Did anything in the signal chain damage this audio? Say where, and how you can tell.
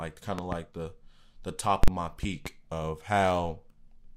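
Yes. Loud pops appear twice. From 0.39 to 0.55 s, just before "the the top", two sharp pops sit on the speech, peaking well above it, around 15 dB. From 2.23 to 2.49 s there is another pair, around 10 dB above. The speech continues underneath both pairs, which points to a voltage step added in the analogue wiring. The likely cause is a plug, switch or static discharge, with the following circuitry shaping each pulse into a thump.

Invalid numbers at full scale hit at 1.84 to 1.88 s, just after "the the top". A processing or format-conversion stage produced infinite or invalid values, and these were clamped to an extreme value for about 43 ms, which fits a 2048-sample block. Because the block is so short, the jump to that extreme and the drop back merge into a single hard bang, and the speech is replaced rather than overlaid.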